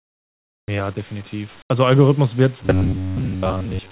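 Speech that's been through a call link; nothing comes through above 4 kHz, which fits G.711 A-law at 64 kbps. At the start, 0.0 to 0.68 s, the background is replaced by comfort noise: a flat, featureless hiss that drops the level by about 35 dB. It happens again briefly from 1.62 to 1.7 s, about 15 dB down. That's likely discontinuous transmission, where the sender goes quiet between speech and the receiver fills the gap with synthetic noise. From 2.64 s to the end at 3.91 s you get robotic sound from repeated short buffers. The voice turns into a metallic buzz pinned at 93.8 Hz. That pitch points to a chunk of roughly 10.7 ms being looped because new audio isn't arriving in time. Most of that stretch is repeats rather than real audio, so the speech only loosely tracks underneath.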